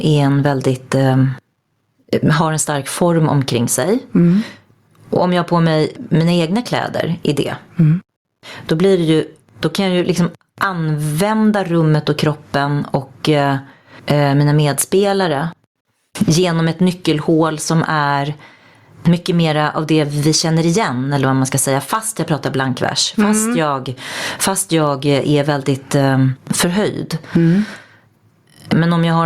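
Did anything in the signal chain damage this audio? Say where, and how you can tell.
Yes, gain pumping runs throughout: the gain swings around 25 dB, pulling loud and soft parts closer in level. Unlike a noise gate, pumping lifts quiet parts rather than cutting them. The likely cause is excessive input gain driving a fast limiter.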